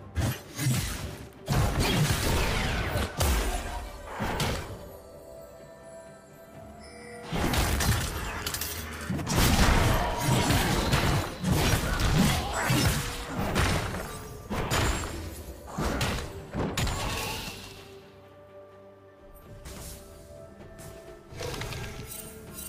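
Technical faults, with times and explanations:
17.17–22.68 s, pre-emphasis left on: the sound turns thin, bright and sibilant, with treble about 8 dB hotter at 10 kHz than at 1 kHz. A treble boost applied before storage was never undone by the matching de-emphasis, which fits the CD 50/15 µs curve.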